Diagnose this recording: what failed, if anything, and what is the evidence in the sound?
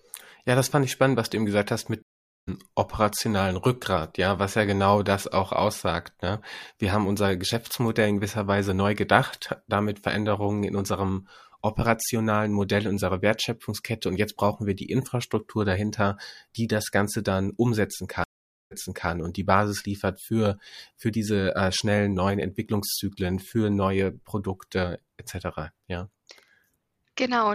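A stream reconnect broke playback twice at the network stage. After "du eben gesagt hast", 2.02–2.49 s falls silent for 450 ms, then resumes about 0.4 s later. After "dann umsetzen", 469 ms of silence spans 18.24–19.10 s, and 395 ms replays before "und die".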